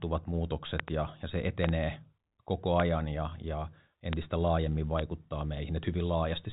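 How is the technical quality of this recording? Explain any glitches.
The recording is marred by five loud pops. The 4 kHz ceiling of its G.711 telephone coding shows as an empty band on a spectrogram.

Loud pops occur at 0.80–0.90 s (a double pop, just before "ja ja se"), 1.64–1.71 s (another double pop), 2.80–2.82 s (just before "ja ja"), 4.13–4.15 s (right after "ja ja") and 4.99–5.01 s. Each is a sudden electrical pulse, likely from a connector, switch or static discharge, added on top of the signal, peaking about 20 dB above it. The speech continues underneath. On a waveform they appear as tall isolated spikes. On a spectrogram they are thin vertical broadband lines.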